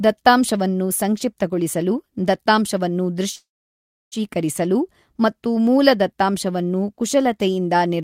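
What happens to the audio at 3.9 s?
At 3.9 s the speech is stopped by a call audio freeze from 3.35 to 4.14 s, just after "ದತ್ತಾಂಶವನ್ನು ಸಂಕ್ಷಿಪ್ತಗೊಳಿಸಲು ದತ್ತಾಂಶವನ್ನು". It was likely caused by packets stalling until the jitter buffer emptied. A brief fading buzz gives way to about 0.68 s of silence, seen as a flat, empty waveform stretch. Speech then resumes with nothing lost, delayed by 0.76 s.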